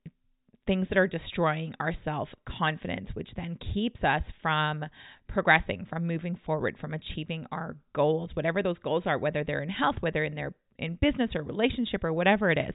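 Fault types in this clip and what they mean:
No fault types are present in this clip.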